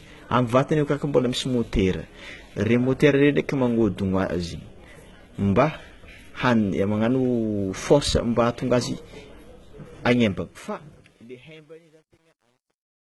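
Throughout the speech, the treble has been rebuilt rather than kept: the likely cause is heavy HE-AAC compression at a rate around 16 kbps, which codes only the lower band and fills the top by copying it upward. Sibilants come out gritty, metallic or lispy.

From 10.02 s to the end at 13.19 s, the fade-out shows truncation distortion on a fade. The gain stage keeps only about 10 bits, without dither, so the fading waveform collapses into coarse steps. From 10.81 s on, the tail turns grainy instead of thinning out smoothly.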